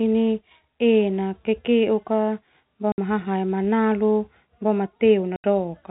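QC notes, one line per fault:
2.92–2.98 s and 5.36–5.44 s, packet loss filled with silence: gaps of 60 ms, just before "hahae manalu boma", and 80 ms, just after "hahae manalu boma", fitting whole 20 ms packets. They are dead silent with hard edges, not smeared or repeated like concealment, through the 4 kHz-limited G.711 telephone band.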